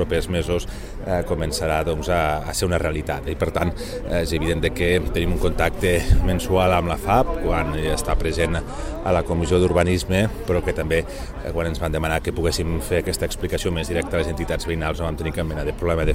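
From 7.95 to 9.92 s a Bluetooth SBC bit pool drop sets in. The link appears to have congested, and the sender lowered the bit pool. What is heard fits a fall from 31 to 15, near 105 kbps. With so few bits, the upper sub-bands starve and the rest are quantised coarsely. The sound turns dull and gritty for about two seconds. On a spectrogram the top band goes dark and speckled over that span, then refills. The waveform envelope barely changes.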